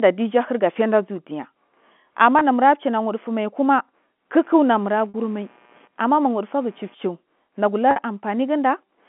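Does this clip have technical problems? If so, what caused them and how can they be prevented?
Yes. Packet loss with pitch repetition occurs at 2.39 to 2.41 s, 5.09 to 5.14 s and 7.91 to 7.96 s. The receiver bridged each gap by repeating the last pitch period, so the 20 ms loss sounds like a briefly held buzz and the two 50 ms losses fade toward silence before speech cross-fades back. The first gap fits about two lost packets and the others about five. Unlike a plain dropout, the gap is filled with tone instead of going silent. A jitter buffer with some headroom and a more reliable network path would prevent it.

Computer activity noise runs from 4.40 to 6.95 s. It is a buzzing pulse train of around 100 Hz, roughly 35 dB below the speech, caused by processor or graphics load shifting the shared ground of the audio circuit. It tracks the computer's activity, not the sound, which distinguishes it from mains hum that sits steadily throughout. 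An external USB interface or a ground-isolated connection would prevent it.

The G.711 telephone band of 200 Hz to 3.4 kHz can be heard as the line's normal narrow bandwidth, not as a fault.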